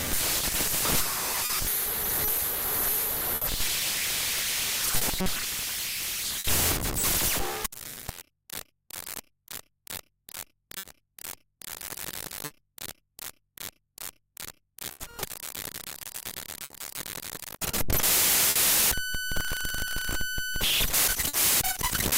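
A recording of everyday sounds, and the timing is unsteady the whole way through because of clock drift between sender and receiver. The sender's clock runs roughly 3% slow, so the receiver's jitter buffer keeps draining and has to pad things out to stay fed. You hear that as small, unevenly spaced hiccups spread through the clip rather than one obvious glitch. The clearest sign of it is the repeated timing corrections from 7.75 to 20.55 s. There the receiver keeps repeating short slivers of audio, which plays things back at about 99% speed and adds around 150 ms in total. Each edit is tiny and all of them stretch rather than trim, so it comes across as a slightly lurching tempo. On top of that there are scattered short gaps in two stretches, where packets went missing or turned up late and the receiver covered each hole by carrying the last bit of sound forward. From 1.45 to 6.47 s there are about four of them, adding up to roughly 200 ms, and the longest is around 70 ms. 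From 10.78 to 21.36 s there are about seven more, roughly 300 ms in all, none much longer than 50 ms. They show up as brief ticks and little smears, and in the second half they overlap with the drift corrections.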